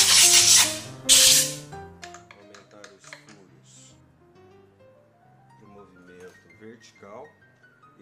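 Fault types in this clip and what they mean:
Nothing stood out on listening; no fault of any kind could be heard anywhere in the clip.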